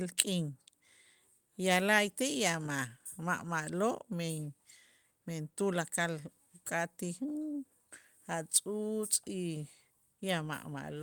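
No technical faults occur at any point in the recording.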